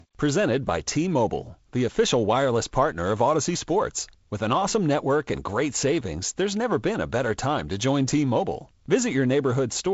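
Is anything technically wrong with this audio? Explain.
No, nothing here sounds technically wrong.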